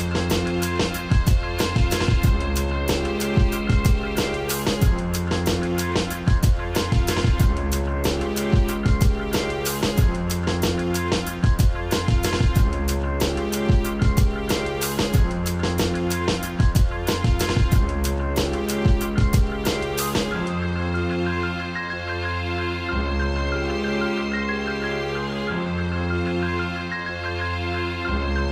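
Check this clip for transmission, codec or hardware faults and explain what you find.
One hardware fault stands out: periodic clock jitter from 5.51 to 8.76 s. Interference is wobbling the converter's sample clock at a rate of around 100 Hz, so each component of the sound picks up sidebands spaced about that far above and below it, more strongly at higher frequencies. The result is a rough, metallic edge on the material. Unlike mains hum at a similar rate, nothing is added in silence: the roughness exists only while sound is present.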